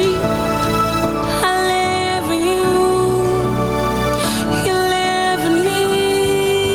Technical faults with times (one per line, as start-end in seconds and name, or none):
0.00-6.74 gain pumping